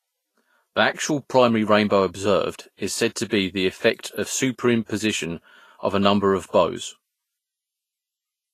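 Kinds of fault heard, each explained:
Vorbis compression: The whole clip has a grainy, hissy sheen, and the top end stops dead at 14.2 kHz. That points to a low-quality Vorbis encode as the likely cause, something around 29 kbps. At that rate the codec keeps a smooth outline of the spectrum and quantises the treble so coarsely that the fine detail turns into noise. The damage is plainly audible on this speech, with tones roughened and consonant onsets softened.
pre-echo: Twice a short hiss creeps in just ahead of a sharp onset, because the codec spreads its quantisation noise across the whole transform block, including the quiet stretch before the attack. The first runs from 3.29 to 3.32 s, about 29 ms, right after "observed is said to" and leading into "the effect of". The second runs from 4.86 to 4.90 s, about 38 ms, just after "the effect of". Both attacks sound smeared.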